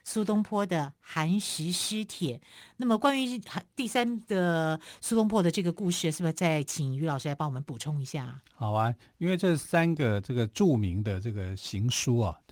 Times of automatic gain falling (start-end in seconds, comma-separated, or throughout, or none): none